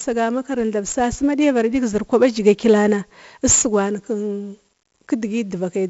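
Throughout, the speech shows heavy 4-bit ADPCM compression. Each sample is coded as a coarse step from a prediction, so gritty hiss rides on loud syllables and vanishes in pauses, unlike steady background noise. Nothing survives above 7.7 kHz, which fits a 64 kbps stream.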